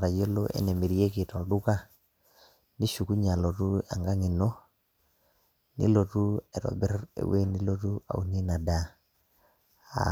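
Nothing in the recording stands out as a technical fault. The speech carries on steadily, with no event that calls for comment.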